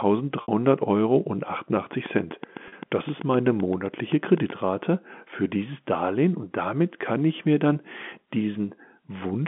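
Speech heard over a G.711 telephone line, band-limited to about 200 Hz to 3.5 kHz, carries two kinds of fault. Packet loss with pitch repetition occurs at 0.42 s for 60 ms and again at 2.68 s for 40 ms. In each gap the receiver bridges the missing audio by looping the last pitch period, so the sound briefly holds with a buzzy, sustained quality instead of dropping out. The 60 ms gap fits three lost 20 ms packets and the 40 ms gap fits two. The second loss falls inside a train of clicks running from 1.93 s to 4.51 s, about twenty sharp pulses at a regular 7.8 per second, each reaching roughly the level of the speech and audible in the pauses as well as over the talk. Their uniform shape and steady rate point to a likely source in electrical interference from nearby equipment or a faulty connection or power supply.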